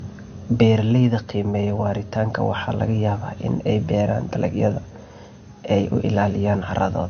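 Transcoding between lossy codecs runs through the whole speech clip: nothing sounds above 6.5 kHz, and two layers of coding artefacts overlap, which fits low-rate MP3 likely re-encoded as AAC-LC, the second codec spending bits on the first codec's damage while keeping its cut-off.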